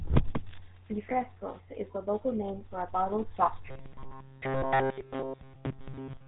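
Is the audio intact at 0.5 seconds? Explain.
No. At 0.5 s, like the whole clip, the speech has GSM full-rate codec damage. The vocal tract is modelled and driven by sparse regular pulses, which fits a 13 kbps GSM link, leaving a buzzy, gravelly roughness, with nothing above 3.8 kHz.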